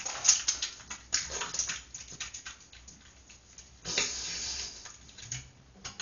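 Throughout, the encoder likely ran as Dolby Digital compression at a starved bitrate, which fits something near 48 kbps, cutting the band so nothing sounds above 7 kHz and filling emptied frequency lines with noise. The sound turns dull, with heavy, rough fluttering around tonal parts.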